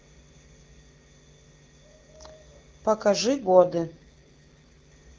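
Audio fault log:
3.38–4.92 s AMR rate drop: the speech turns rough, raspy and synthetic-sounding for about 1.5 s, with no gap and no change in bandwidth, then returns to the clean HD Voice quality heard before it. The sudden roughness at full band fits the AMR-WB codec being switched from its 23.85 kbit/s mode down to around 8.85 kbit/s, so fewer bits describe the speech while more go to error protection, until the higher rate resumes.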